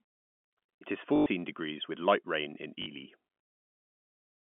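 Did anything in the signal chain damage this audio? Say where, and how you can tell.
Yes, at the network stage: packet loss with last packet repeated. From 1.16 to 1.26 s, and briefly from 2.82 to 2.86 s, the speech stutters robotically with a 50 Hz buzz, which fits 20 ms packets replayed until new ones arrived.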